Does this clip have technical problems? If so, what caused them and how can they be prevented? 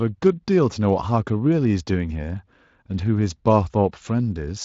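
No, nothing in this speech clip points to a technical problem that needs fixing. It has been carried over a Speex coding path, and that coding leaves only a light mark on the sound.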